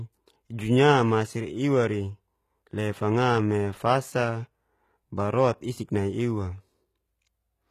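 Throughout, the speech carries plainly audible HE-AAC compression damage, likely from a low bitrate near 20 kbps. Treble is rebuilt, not original. Sibilants sound gritty and metallic, and nothing remains above 14.9 kHz.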